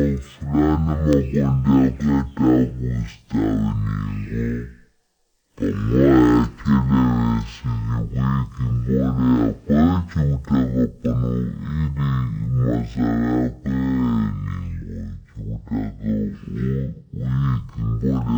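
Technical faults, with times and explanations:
throughout, stereo read as mono: the playback path took the interleaved left and right samples as one channel, so every two-sample pair became consecutive mono samples. That stretches the speech to half speed (0.5x) and drops its pitch a full octave (-12 semitones), making it slow and deep.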